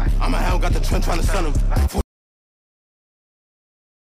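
At 2.01 s the sound stops dead and stays gone until the end, an audio dropout to silence, likely from a lost input. The waveform flatlines and the spectrogram turns dark.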